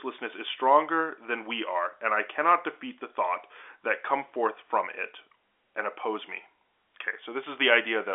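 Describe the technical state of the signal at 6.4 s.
At 6.4 s the audio is intact, with the telephone-band G.711 coding passing the speech cleanly and nothing heard above about 3.8 kHz.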